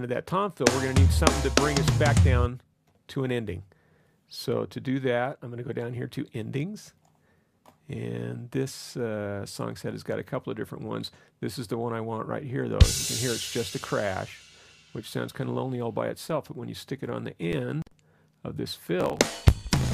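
At 18.99 s, running to the end of the clip at 19.94 s, a block size mismatch (truncated) sets in: one stage hands over longer blocks than the next stage takes, so the tail of each block is discarded. The result is a buzz at about 54 Hz, and the sound hurries along about 1.16 times faster. This fits 1024-sample blocks being cut short. On a waveform, abrupt discontinuities recur every 18 ms or so. On a spectrogram they show as vertical striations with a comb of harmonics spaced 54 Hz apart.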